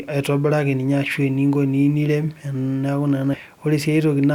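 At 3.33 to 3.37 s the speech jumps abruptly forward with a small blip, likely a stream segment skipped after failing to load, dropping part of the programme.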